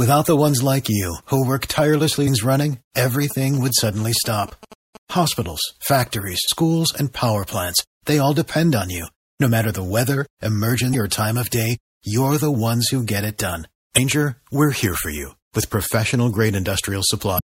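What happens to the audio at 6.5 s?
From 6.44 to 6.49 s the speech breaks into a short glitch lasting about 45 ms. That is damaged data in a compressed stream. Part of the coded data at that point is wrong. The decoder misreads those frames and loses its place. It then hunts for the next valid frame header. So a brief glitch replaces the sound there before the speech picks up again.

Under the glitch, the whole clip carries audible MP3 compression damage. The speech sounds watery and swirly. The s sounds turn metallic. The likely cause is an encoder that ran short of bits, which fits a low bitrate around 64 kbps. It dropped weak frequency lines, so they flicker in and out from frame to frame. Sharp onsets come out smeared.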